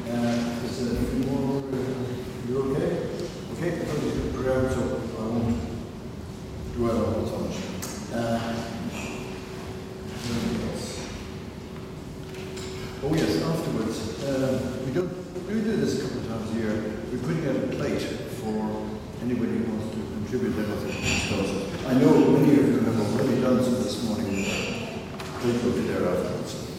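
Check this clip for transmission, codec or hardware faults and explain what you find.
Two brief faults are audible, both of the same kind. The sound dips abruptly by about 6 dB from 1.60 to 1.73 s, and again from 15.01 to 15.35 s. This is most likely one channel dropping out. When one side of a stereo pair goes silent and the result is summed to mono, material shared by both sides loses half its contribution. Anything carried only on the lost side vanishes outright. Each dip ends as suddenly as it starts.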